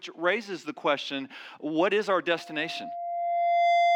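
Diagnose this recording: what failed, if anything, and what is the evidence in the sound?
Loudspeaker feedback squeal begins at 2.35 s and runs to the end of the clip at 3.96 s. The failure is in the analogue acoustic path: a microphone is picking up the loudspeaker it drives. At 691 Hz the loop gain rises above one, so a pure tone at that pitch swells over roughly a second and a half until it sits a few decibels above the rest of the sound. Nothing breaks the loop before the recording stops.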